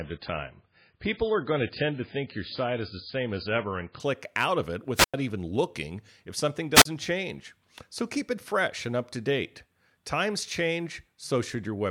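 Speech, opening as an adaptive stream starting at a low bitrate: until 4.0 s there is nothing above 5.1 kHz and codec artefacts are stronger, which points to roughly a 16 kbit/s MP3 stepping up to about 128 kbit/s. The sudden improvement with no gap separates it from a connection stall. Wireless microphone squelch dropouts follow at 4.95–5.14 s, muting for 96 ms, and 6.74–6.85 s, muting for 38 ms. Each is a rise of hiss then a hole of near silence as the receiver's squelch cuts a faded FM signal. That hiss before the hole separates these from digital packet loss.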